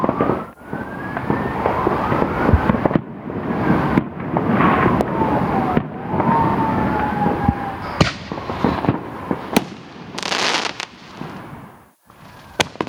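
Gain pumping runs throughout: the gain swings by roughly 25 dB and is pulled down under each loud sound, likely from excessive input gain driving a fast limiter.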